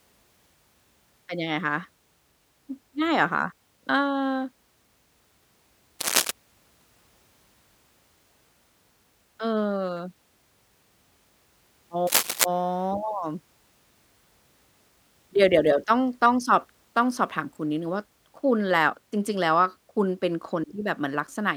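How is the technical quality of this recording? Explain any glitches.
The speech is marred by two bursts of cable scratch noise, at 6.01 to 6.31 s and 12.07 to 12.46 s. These are dense, uneven crackles roughly as loud as the speech, likely from a worn cable or connector shifting its contact. They show as ragged broadband smears on a spectrogram and jagged spikes on the waveform.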